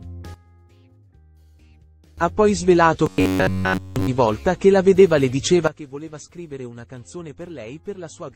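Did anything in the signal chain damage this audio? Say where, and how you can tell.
Yes. A sudden gain jump occurs twice: at 0.34 s the level drops by about 15 dB until 2.18 s, and at 5.68 s it drops by about 16 dB through to the end. Both are likely digital gain steps applied without a ramp in processing. Unlike a compressor, the change is instantaneous and the background noise falls with the sound.

From 3.06 to 4.08 s there is robotic sound from repeated short buffers: a rigid, metallic buzz at 93.8 Hz, with essentially the whole stretch made of repeats. That pitch corresponds to a period of about 10.7 ms, which points to a buffer of that length being replayed, likely after a driver or buffer underrun. A codec artefact would not lock the sound to one fixed pitch like this.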